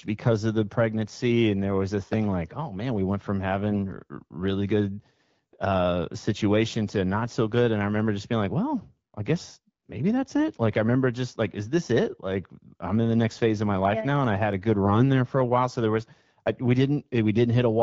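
AMR bit errors hit this speech clip at 3.72 to 3.82 s, after "man we went from", and at 14.85 to 14.92 s, after "I had a good". Each burst, roughly 0.08 to 0.11 s long, fits a handful of corrupted frames on a weak link running around 5 percent bit errors. Flipped low-priority bits misplace the excitation pulses and skew pitch, gain and spectral detail, so the wideband sound briefly turns hoarse and gargly while keeping its level.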